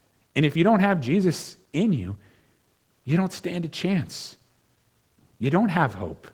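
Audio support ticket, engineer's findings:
Opus voice compression, whole clip. Hybrid coding: linear-prediction layer carries the speech band, transform layer fills above 8 kHz; excitation coded coarsely, consistent with about 16 kbps in 20 ms frames. Audible result: speech plainly degraded, hoarse and slightly robotic, with content reaching 23.4 kHz. Fullband kept, but too few bits spread across it.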